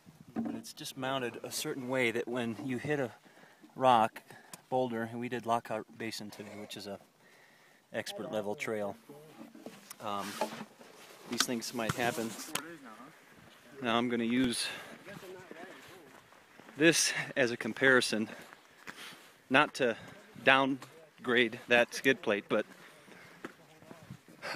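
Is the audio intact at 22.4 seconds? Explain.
Yes, at 22.4 seconds the audio plays through intact, with no dropout, click or other fault at that point.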